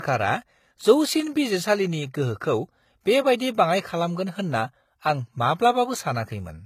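Throughout, the speech was likely transcoded between lossy codecs, a low-bitrate codec then MP3, so mixed artefacts sound together and nothing remains above 14.9 kHz.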